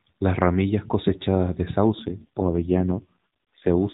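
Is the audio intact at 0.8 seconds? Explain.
Yes, the audio is intact at 0.8 seconds, where the speech comes through with no dropout, click or distortion beyond the narrowband sound of the AMR-NB mobile codec at 12.2 kbps.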